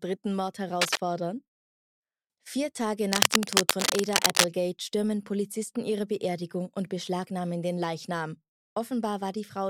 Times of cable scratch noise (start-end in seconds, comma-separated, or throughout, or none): 0.81-1.00, 3.12-4.46